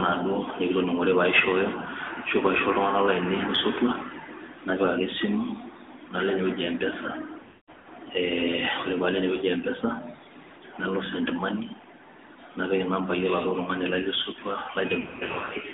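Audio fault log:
throughout, AMR narrowband mobile codec: The speech sits in a thin phone band, roughly 250 Hz to 3.7 kHz, with nothing on top. The buzzy, synthetic edge fits the 10.2 kbps AMR-NB mode. The codec rebuilds the voice from a vocal-tract model driven by a handful of pulses per subframe, so breathiness and fine texture get swapped for that plasticky coding sound. The damage is plainly audible.
7.40 to 7.86 s, lost AMR speech frames: About 320 ms of audio goes missing, scattered across roughly 440 ms, which fits around 16 dropped 20 ms frames. The worst stretch is a 200 ms run, long enough that the decoder's stretched-out guess at the last good sound fades all the way to silence before the speech comes back rough.
15.00 to 15.55 s, lost AMR speech frames: Right after "tungani lai le sotua", about 360 ms is lost, scattered across roughly 520 ms, pointing to around 18 bad frames. 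No single gap runs past 80 ms, so rather than fading out, the sound warbles and dips as the decoder keeps patching holes with repeated pitch and filter settings at lower gain.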